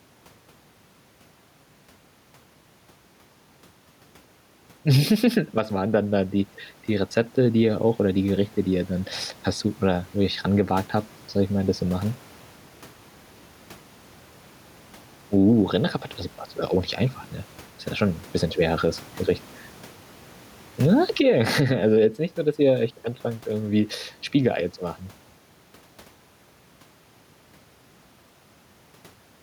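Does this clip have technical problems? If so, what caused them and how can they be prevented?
Yes. Gain pumping runs throughout: the gain swings by roughly 10 dB, squashing the dynamics, and the room noise sits about 37 dB below the speech. The likely cause is microphone gain set far too high, so a fast limiter or compressor clamps every peak. Lowering the input gain and avoiding fast automatic compression would prevent it.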